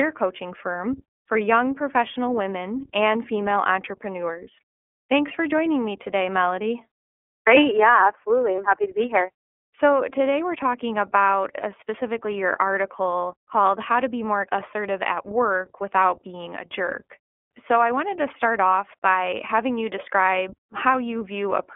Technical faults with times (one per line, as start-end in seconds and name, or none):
0.00-21.75 iLBC codec